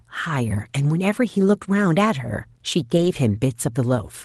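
A lost packet rebuilt from error correction occurs between 2.97 and 3.07 s. Three separate packets never arrived, but each following packet carried a low-bitrate backup copy, and the decoder played those copies instead of leaving a gap. The speech continues without a break, but for roughly 60 ms it turns rougher and noisier, which fits three lost 20 ms packets. The surrounding call audio has a ceiling near 12 kHz.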